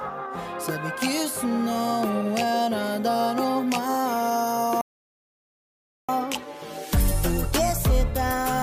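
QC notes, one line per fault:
4.81 to 6.09 s, playback stall: the sound cuts off mid-flow and the output sits in dead silence for about 1.27 s before anything returns. The likely cause is the player running dry of buffered data, or its output thread being blocked, so nothing reached the device until playback could resume from where it had stopped.
6.09 s to the end, catch-up at higher speed: right after the gap the audio comes back running fast, at 1.1 times normal speed, with its pitch raised by about a semitone and a half. This lasts through to the end of the clip. The player is resampling its backlog to claw back the time lost in the stall, so tempo and pitch rise together rather than the tempo alone.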